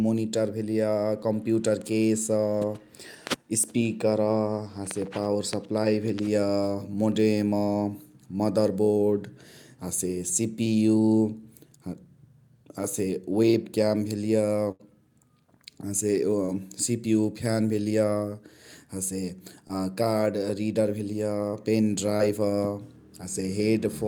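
At 14.71 to 14.81 s there is a burst of packet loss. About 80 ms of audio never arrived, and the receiver filled the gap by extending the last sound it had and fading it down. What you hear is a held, dwindling tail before the audio jumps ahead with that stretch gone. On a spectrogram, the harmonics or noise band go flat and unchanging and then dim. The waveform shows a repeating, shrinking envelope ending in an abrupt resumption.

Short concealed packet loss follows at 16.45 s, 19.68 s and 22.17 s. Each time, roughly 20 ms failed to reach the decoder, and the receiver invented a brief continuation before blending back into real audio. These sound like quick smears or wobbles, and a short sound can vanish. On a spectrogram, each appears as a thin vertical strip of smoothed, copied-looking texture. In the waveform, there is a tiny, overly regular patch with a slight joint where real signal resumes.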